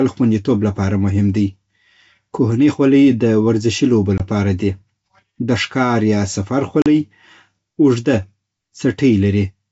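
At 4.18 to 4.22 s, between "خولۍ د ورزشي لوبو" and "لپاره دي", and again at 6.82 to 6.87 s, just after "د ښکار یا سفر", the speech drops into silence. These are packet loss on an ADPCM call: about 20 ms, then 40 ms, goes missing, which points to one lost packet and then two. On the waveform each gap is a flat, square-edged hole. On the spectrogram it is a blank vertical stripe across the full wideband range of the G.722 coding. Afterwards the decoder's predictor and step size are out of step with the sender's, so the speech returns slightly distorted and settles within tens of milliseconds.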